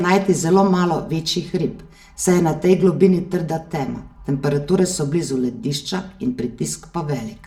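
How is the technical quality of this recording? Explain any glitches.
The recording has one problem that runs the whole way through. Channel delay (comb filtering): one channel lags by about 5 ms before the mono sum, so notches start near 100 Hz and the speech sounds hollow and phasey.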